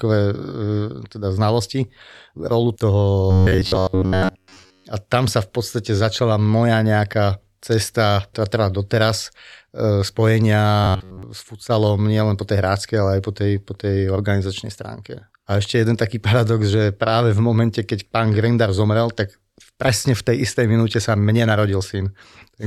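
A speech clip that twice turns into a rigid, metallic buzz pitched near 94 Hz, still loosely tracking the speech: from 3.31 to 4.86 s, right after "teda znalosti rolu toho", and again from 10.84 to 11.23 s. This is robotic sound from repeated short buffers, likely caused by audio arriving too seldom, so a fragment of roughly 10.7 ms was looped to fill the gaps, with most of the real audio skipped.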